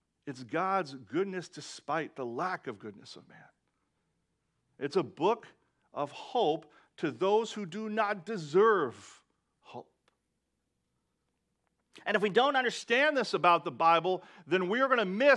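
From 9.78 to 12.82 s there's a wrong sample rate: playback runs about 1.09 times fast, lifting pitch roughly 1.5 semitones, which fits 22 kHz audio played at 24 kHz.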